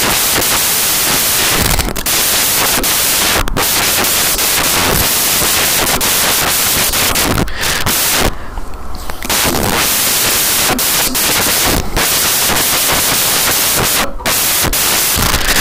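From start to finish the speech is buried under loud, hissing white noise. These are samples built from the wrong bytes: the reader assembles each value wrongly, so the rapidly changing low bits become its dominant part.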